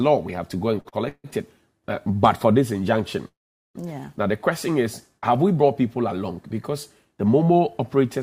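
Repeated stalls (stutter) run from 0.75 to 1.27 s. Packets were arriving late, so the jitter buffer drained four separate times. Each time, the receiver stretched the last bit of sound to bridge the wait, about 245 ms in total, with the longest hold 154 ms. Nearly half of that half-second is filler, so the audio lurches and drags, though nothing is actually lost.

A call audio freeze follows from 3.28 to 3.77 s. The sound holds briefly and then drops to silence for about 410 ms of the roughly 470 ms pause. It then resumes exactly where it stopped, with nothing skipped. The likely cause is packets being held up in transit until the jitter buffer ran dry. Afterwards, everything plays about 470 ms later than before.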